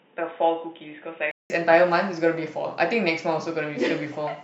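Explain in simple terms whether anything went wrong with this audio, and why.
For the first 1.5 seconds the speech sounds dull and boxy, like a cheap headset: nothing above about 3.8 kHz comes through, and there's very faint background noise. At 1.5 seconds the sound goes silent for about 0.19 seconds, then returns clearer and fuller at much the same loudness. The likely cause is an input switched to a poorer device: the recording began on a lower-quality microphone before changing to a better one.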